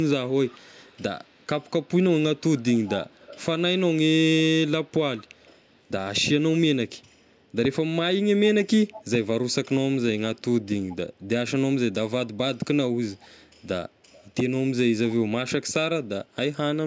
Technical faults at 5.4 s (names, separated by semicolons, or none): echo leak